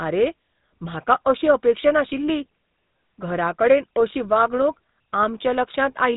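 From start to finish the speech has a buzzy, gravelly roughness and a boxed-in, telephone-like dullness, with nothing above about 3.8 kHz. That is the GSM full-rate codec at work. It models the vocal tract as a filter and drives it with a coarse train of regularly spaced pulses that keeps only a fraction of the original excitation, so the fine structure of the voice is lost. The damage is plainly audible, which fits a rate of around 13 kbps.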